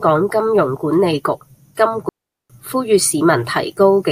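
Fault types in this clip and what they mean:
Digital wireless dropout: the radio link lost too much data, so the receiver muted. From 2.09 to 2.50 s the speech drops into clean near silence, with no noise burst either side.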